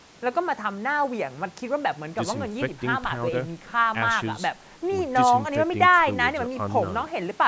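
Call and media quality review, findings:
No findings in this call and media quality review: the speech passes through normal call microphone processing, with its high-pass filter trimming the lowest bass and nothing above 8 kHz.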